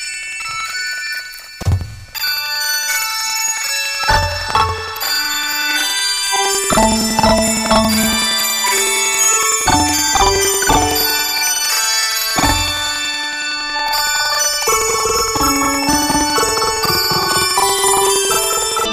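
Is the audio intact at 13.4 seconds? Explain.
No. At 13.4 seconds, as across the whole clip, planar audio is being read as interleaved. Blocks of about 93 ms, which fits a 4096-sample block, store all left samples and then all right, but playback takes them as alternating pairs. Each block therefore plays twice at double speed, left half then right half, so the overall pace holds while the sound sits an octave high with a flutter at about 10.8 Hz.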